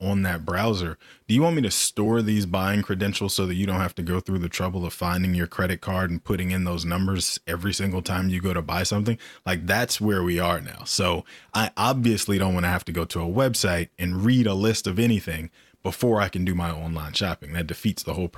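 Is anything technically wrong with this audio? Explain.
No, nothing technically wrong can be heard here.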